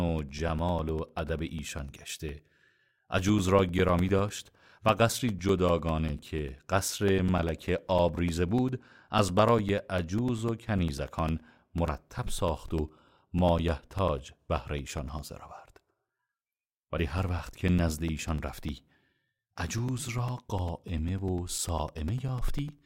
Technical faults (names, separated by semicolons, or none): periodic USB or driver dropouts